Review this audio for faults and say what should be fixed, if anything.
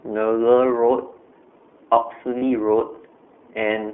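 The whole clip runs through the iLBC codec. The band is confined to a telephone line, roughly 250 Hz to 3.4 kHz, so the speech is thin and lacks air. Coding damage is plainly audible as a rough, slightly synthetic texture. Each 20 ms frame's excitation is coded independently, which costs detail compared with predictive codecs, and the grain fits iLBC's 15.2 kbps mode. To prevent it, use a wideband codec such as Opus wherever the endpoints support one.

Lost iLBC frames appear from 2.38 to 2.43 s, a 40 ms gap that fits two consecutive 20 ms frames. During the gap the decoder conceals the loss by repeating the last pitch cycle with added noise, which is heard as a brief held, buzzy vowel in place of the real sound. Because iLBC frames do not depend on earlier ones, the speech returns cleanly right after. To prevent it, reduce packet loss on the network path and enlarge the jitter buffer or add forward error correction.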